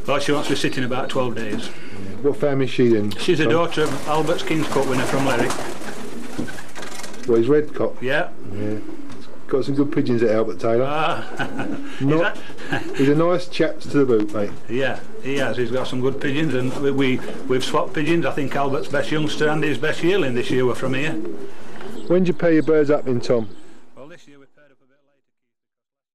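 No technical faults can be heard anywhere in this audio.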